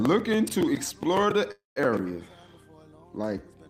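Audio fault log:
1.51 to 1.79 s, call audio freeze: the sound stalls for about a quarter of a second, filled by a fading continuation of the last sound that drops to silence for roughly 160 ms. When the audio resumes it carries on exactly where it stopped, with nothing skipped, so about 247 ms of delay has been added to everything after. The likely cause is packets held up in transit until the jitter buffer ran dry and the receiver concealed the gap.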